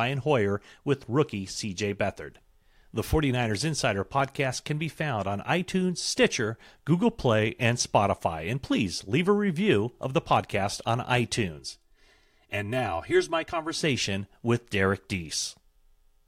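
After "of the podcast on", from 11.59 to 13.81 s, one channel lags about 3 ms before mono summing. This channel delay (comb filtering) cuts evenly spaced notches from roughly 150 Hz upward, leaving the speech hollow and phasey.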